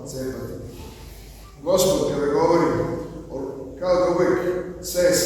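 No technical faults can be heard anywhere in the audio, with the signal holding steady throughout.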